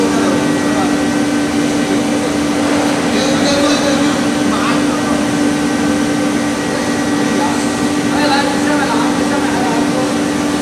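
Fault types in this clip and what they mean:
No technical faults can be heard anywhere in this audio. There is nothing to list for it.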